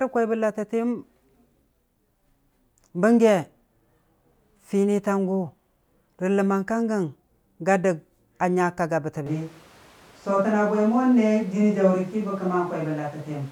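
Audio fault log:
9.27 s to end, switch to a distant microphone: abruptly turns roomy and hollow with thinner bass at about the same loudness, likely a far microphone replacing the close one. Spectrograms show weaker lows and reverb tails, with pauses filled by noise about 30 dB down.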